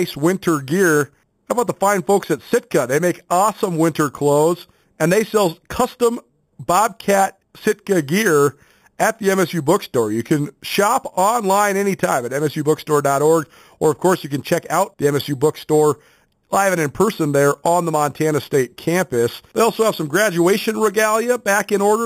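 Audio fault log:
Throughout, imaging from sample-and-hold upsampling: the speech sounds like it came from a low rate, likely around 8 kHz, and was brought up to 44.1 kHz just by repeating each sample with no smoothing. That leaves mirrored copies of the spectrum, the first filling roughly 4 to 8 kHz at about 16 dB below the signal. You hear it as a bright, metallic fizz that rises and falls with the talking, with its pitch movement running opposite to the voice's.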